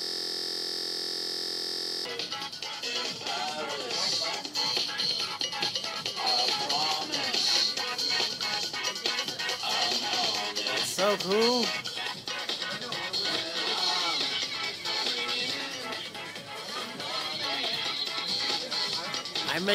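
A system hang loop is already running when the audio begins and lasts until 2.05 s. The computer or its driver stalled, but the sound hardware kept replaying its ring buffer. The same 23.22 ms piece of sound repeats 87 times. That length fits a 1024-sample buffer. At this short length, the repeats merge into a steady buzz at about 43.1 Hz, the loop rate.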